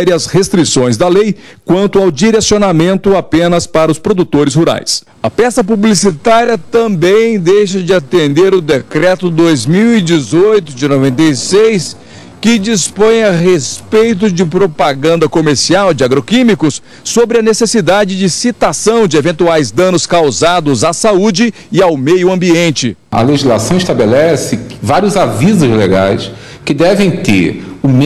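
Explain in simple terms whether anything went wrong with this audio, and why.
A time-stretched section runs from 5.61 to 15.17 seconds. The sound suddenly slows to about two-thirds speed while its pitch stays the same, so it drags. Software likely lengthened this part by repeating tiny slices of audio.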